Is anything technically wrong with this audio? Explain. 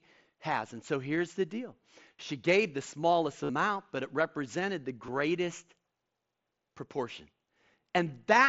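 Yes. Concealed Bluetooth headset packet loss at 2.13–2.19 s, 3.44–3.49 s and 5.07 s: lost packets are refilled by repeating the best-matching recent waveform. The brief gaps at 2.13 and 5.07 s are nearly hidden. The 52.5 ms gap at 3.44 s becomes a steady buzzy tone with a slight warble as real sound returns.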